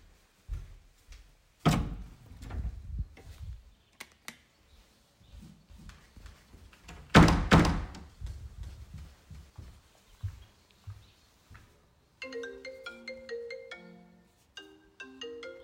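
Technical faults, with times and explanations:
5.7–9.5 s, doubled audio track: every event in the sound is followed by a second, quieter copy, roughly 400 ms later and about 5 dB down. The copy is full-band and carries no decay or added room tone, and it cuts in and out abruptly at both ends. The likely cause is the same audio reaching the mix twice, once via a slower path.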